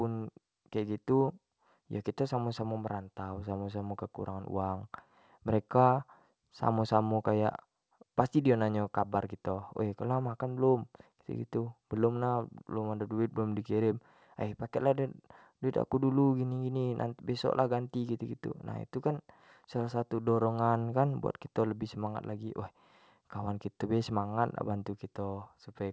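No technical faults can be heard anywhere in the speech. The sound stops at 8 kHz, as expected from call microphone processing and a wideband codec on a WebRTC call path, and that upper limit is normal for such a call.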